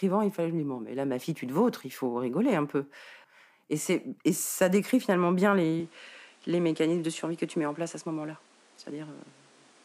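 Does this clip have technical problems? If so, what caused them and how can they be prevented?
Yes. From 5.80 s on, everything above 11.4 kHz disappears and new background noise appears, likely from the input being switched to a poorer device. Lock the input device before recording.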